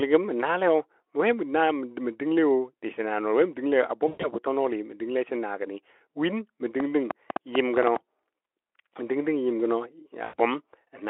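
At 4.08 s, VoIP packet loss concealed by the speech codec begins. About 140 ms of audio went missing, scattered over 160 ms with one gap of about 120 ms, which fits seven 20 ms frames. The decoder filled the hole by extending its last pitch and spectral shape at falling gain, so the speech smears into a buzzy tone or coloured noise that fades until 4.28 s. Each rebuilt frame leans on the one before, so it stays thin briefly after real packets resume.

From 6.8 s to 7.97 s a train of clicks runs over the sound: about ten sharp, similar pulses at an uneven pace averaging 6.9 per second, standing roughly 15 dB above the speech. Ticking this regular in shape is likely from interference or a struggling interface injecting spikes into the line. They stay audible in the pauses as well.

At 10.23 s a second loss of about 100 ms is concealed the same way, producing a short, decaying smear through 10.35 s. 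It sits within narrowband 300 to 3400 Hz Speex audio.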